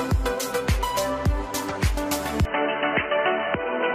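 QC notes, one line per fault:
2.45–3.95 s, input switched to a poorer device: from 2.45 s to the end the sound turns abruptly dull and boxy, with nothing above 3.1 kHz, while loudness stays about the same and there is no gap at the change. A faint new noise floor, about 55 dB below the signal, comes in with it. The likely cause is the recording input jumping mid-take to a narrower-band microphone or a headset's call profile, which carries its own tone and background noise.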